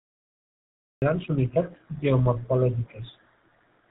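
The clip opens in digital silence until 1.02 s, then cuts in mid-sound before "grans unitats". This cut-off start has no natural attack.

Throughout, tandem speech coding is audible. AMR-NB and GSM full rate each recoded the speech, leaving it rough, warbly and muffled, with nothing above 3.8 kHz.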